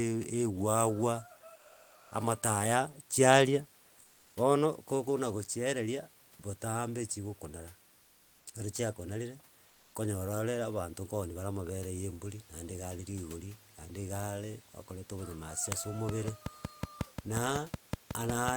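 From 1.57 to 2.11 s, sound dropped by the voice detector cuts out about 210 ms of the speech itself. The sender's detector likely misjudged part of the speech as background and stopped transmitting, so the receiver filled roughly 540 ms with synthetic noise. The result is a brief hole where the speech gives way to steady noise or near silence before the detector triggers again and the signal returns. The behaviour fits Opus-style discontinuous transmission.

Comfort noise in place of the background appears twice: from 7.99 to 8.35 s (about 360 ms) and from 9.67 to 9.91 s (about 240 ms). In both pauses the real background, roughly 33 to 34 dB below the loud passages, is swapped for steady, featureless noise about 2 dB quieter. The texture of the room disappears and then snaps back when speech resumes. The likely cause is discontinuous transmission halting the stream during silence and the receiver generating a noise estimate instead.

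From 16.09 s to the end of the clip, a train of clicks ticks at a regular 5.4 per second. The pulses peak well above the speech level, about 15 dB, and sound much the same in shape. They carry straight through the pauses. Their evenness points to a likely cause in electrical interference from nearby equipment or a faulty connection or power supply. The room noise sits around 31 dB below the speech.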